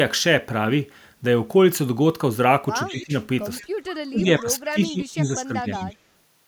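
From 2.87 to 3.03 s, and again at 3.58, 3.92, 5.21 and 5.74 s, a faint echo leak follows the speech by 177 ms at about 20 to 30 dB down, likely from a loudspeaker echo canceller passing residue. Between 2.9 and 3.13 s and across 4.11 to 5.93 s, speech is suppressed in double talk: the level dips by as much as about 15 dB, totalling roughly 1.2 s.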